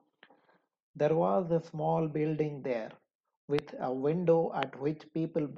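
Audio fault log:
3.59 s and 4.63 s, loud pop: Two separate sharp pops jump out above the speech, each a single brief click lasting about 20 ms and peaking roughly 20 dB above the surrounding level, while the speech carries on underneath. The likely cause is a sudden voltage step or pulse entering the signal path, such as a connector, switch, static discharge or driver glitch, which the following circuitry turns into a short, hard transient.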